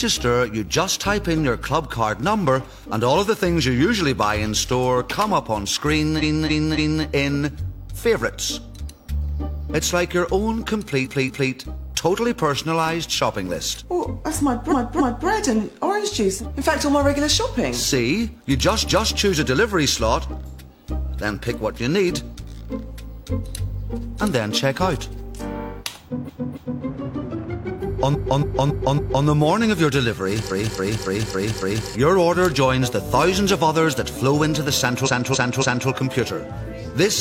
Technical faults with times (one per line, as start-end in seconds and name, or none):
6.18-7.02 repeated frames
11.01-11.47 repeated frames
14.68-15.24 repeated frames
18.86-19.14 repeated frames
26.24-26.80 repeated frames
28.10-29.21 repeated frames
30.47-31.86 repeated frames
35.02-35.85 repeated frames